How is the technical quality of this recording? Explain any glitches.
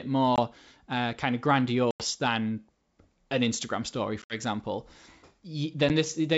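The recording has four dropouts. Packet loss on an ADPCM call occurs at 0.36–0.40 s (just before "uh kind of"), 1.91–2.03 s (right after "uh kind of"), 4.22–4.39 s and 5.89 s. Missing packets leave hard-edged silent gaps of 10 to 90 ms, and the third gap is broken into pieces. The receiver's adaptive predictor and step size then no longer match the sender's, so the speech comes back slightly distorted before settling.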